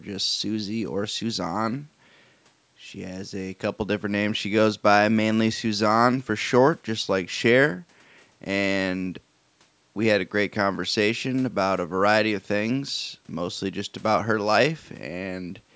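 Nothing's wrong here: it's speech that went through a call's microphone processing, so the lowest bass is trimmed off and there's nothing above 8 kHz, which is just how that path normally sounds.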